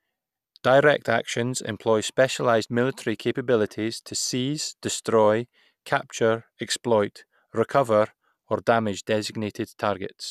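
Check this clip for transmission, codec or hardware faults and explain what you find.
Nothing stood out on listening to this speech recording.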